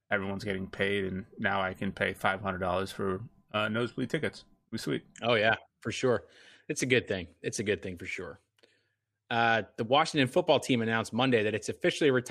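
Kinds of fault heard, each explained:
Nothing stood out on listening to the speech.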